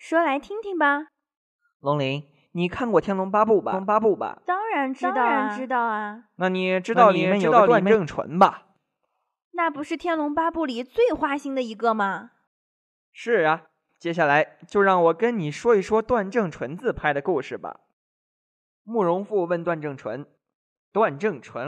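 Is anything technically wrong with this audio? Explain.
Yes. From 3.73 s to 7.95 s the speech is doubled: a second, equally loud copy trails the first by about half a second, so every syllable is echoed crisply, with no fading tail or room sound, and the copy switches on and off abruptly at those two points. This doubled audio track is likely the same signal being mixed in twice, with one copy arriving through a slower path or held out of step by an edit.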